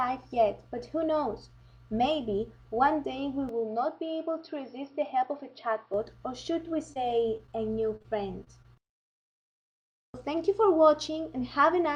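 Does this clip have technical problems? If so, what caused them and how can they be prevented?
Yes. From 3.49 to 5.94 s the sound turns dull and about 5 dB quieter, with nothing above 5.5 kHz and a faint new noise floor. This is likely an input switched to a poorer device. On a spectrogram the top band is abruptly empty over that span. Locking the recording to one fixed microphone prevents this.

Short concealed packet loss smears brief moments at 6.93, 7.37, 7.47, 7.96 and 8.02 s. Each 20 to 40 ms hole was filled by extending the preceding sound, which shows as short, smoothed, repeated patches in the waveform. A jitter buffer and a more stable network connection prevent this.

Repeated packet loss gives a choppy, robotic stretch from 8.44 to 8.92 s. Five short gaps, the longest 23 ms, were patched in quick succession, and a spectrogram shows a striped, broken texture there. Forward error correction or a wired link prevents this.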